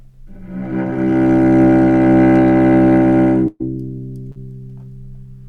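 From 3.47 to 3.62 s, a burst of packet loss drops about 120 ms; the receiver stretches and fades the last sound, briefly going silent, before resuming further on.

At 4.32 s, a short concealed packet loss removes about 40 ms, which the receiver patches by continuing the previous sound, leaving a brief smear before the real audio returns.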